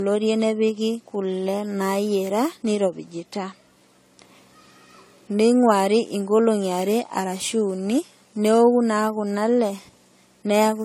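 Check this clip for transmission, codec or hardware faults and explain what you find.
One codec fault runs through the whole recording: generation loss. From start to finish the speech sounds swirly and hollow, consonant attacks are smeared, and nothing is present above 17.9 kHz. The likely cause is repeated lossy coding: the sound appears to have passed through an AAC-LC stage, pointing to around 64 kbit/s, about five times over. Each pass re-quantises on a shifted frame grid, so noise and spectral gaps build up beyond what that bitrate alone would produce.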